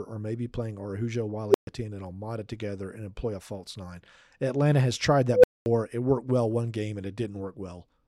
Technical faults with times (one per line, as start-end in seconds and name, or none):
1.49-1.67 unstable filter
5.30-5.66 unstable filter